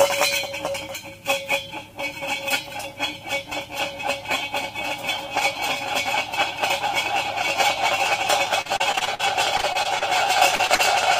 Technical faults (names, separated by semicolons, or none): repeated packet loss (robotic sound); short concealed packet loss